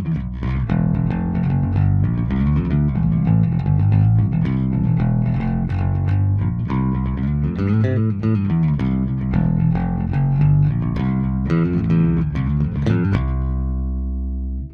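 No technical faults detected.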